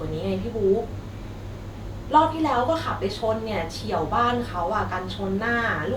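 A short speech recording with no audible technical fault anywhere in the signal.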